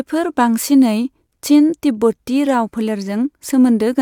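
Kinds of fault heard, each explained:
No faults can be heard in this recording.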